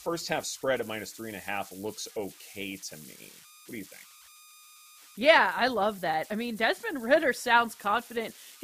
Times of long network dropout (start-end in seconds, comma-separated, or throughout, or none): none